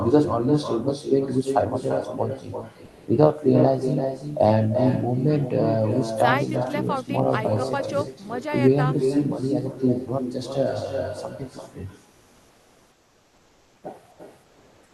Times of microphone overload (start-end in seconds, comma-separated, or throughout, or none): none